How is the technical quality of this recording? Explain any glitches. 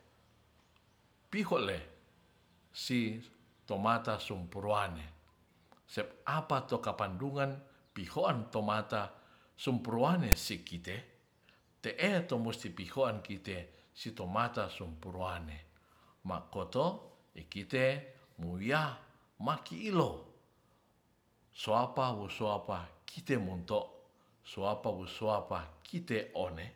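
The recording has one glitch: a very short burst of file tags played as audio at 10.32 s. Here a block of text metadata was decoded as if it were sound, so character bytes became sample values. Because text bytes cluster in a narrow numeric range, the result is a loud rasp offset to one side of zero rather than centred noise. It lasts only a few milliseconds and is heard as a sharp click of static cutting into the speech. On a waveform it appears as a dense, hard-edged block displaced from the centre line; on a spectrogram, as a thin vertical stripe of broadband energy.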